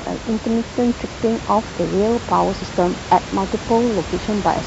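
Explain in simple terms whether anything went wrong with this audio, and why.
Nothing went wrong with this speech recording; the only thing underneath the talking is some background noise from the room where the microphone was, which is part of the recording itself and not a problem with the system.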